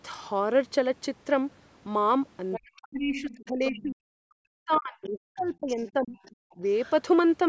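At 2.52 to 2.81 s a second, fainter voice sits under the speech at about 15 dB down. This is the other side's voice leaking through, most likely because the far end's loudspeaker output reached the microphone and the echo canceller left a residue. It returns from 3.16 to 3.86 s at about 15 dB down, from 4.72 to 5.42 s at about 20 dB down, and from 6.24 to 6.91 s at about 25 dB down. After the first return, each is quieter than the last.

Overlapping these, from 2.57 to 6.17 s, the main speech is suppressed in double talk. Its level dips, by as much as around 40 dB at the deepest point, across roughly three seconds in total. The likely cause is that the canceller could not separate the near talker from the echo while both were active, so it attenuated everything. A second, brief dip of around 10 dB follows at 6.57 to 6.62 s, inside the last leaked passage.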